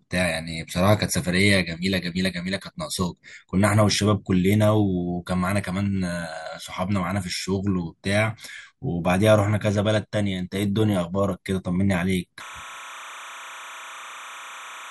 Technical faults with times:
12.40-14.91 timecode bleed

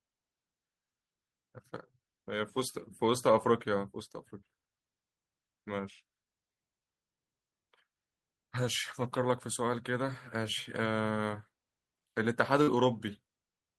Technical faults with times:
12.63-12.70 short concealed packet loss

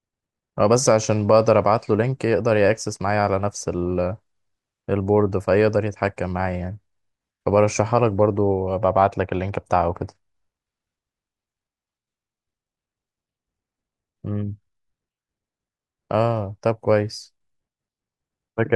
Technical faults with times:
none

